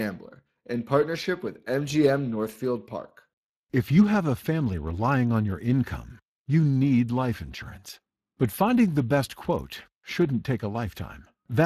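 Speech carrying Speex codec damage throughout, plainly audible as a hoarse, noisy roughness in the voice. It points to a bitrate around 22 kbps, with nothing above 15.3 kHz. That grainy CELP texture marks it apart from the swirly, warbling artefacts of transform codecs like MP3.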